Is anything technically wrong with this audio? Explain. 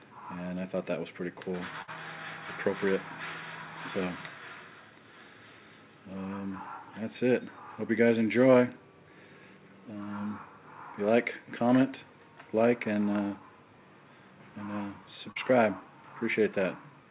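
Yes, there are two dropouts from lost packets, heard over a call path whose audio stops at 4 kHz, which fits G.711 mu-law at 64 kbps.

At 1.82 to 1.89 s, a burst of packet loss: about 60 ms of audio never arrived in time. The receiver stretched the last sound for 54 ms as a fading buzz or hiss, then jumped ahead. On a spectrogram this shows as smeared, decaying bands, and on a waveform as a shrinking envelope.

At 15.31 to 15.38 s, a short concealed packet loss: about 40 ms went missing and was patched with 42 ms of extrapolated sound blended back into the real signal. It is heard as a brief smear or wobble, and shows as a blurred strip on a spectrogram.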